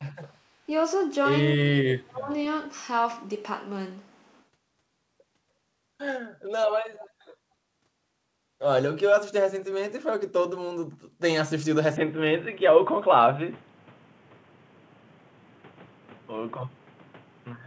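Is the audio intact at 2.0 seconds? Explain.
No, not at 2.0 seconds. That moment falls inside a stretch from 1.56 to 2.31 s where the speech gets pushed down hard, at its deepest by roughly 35 dB, so it dips and partly drops out over most of that three-quarter second. It sounds like speech suppressed in double talk. The likely cause is the far end talking at the same moment, with the echo canceller unable to tell the talker from loudspeaker echo and ducking everything.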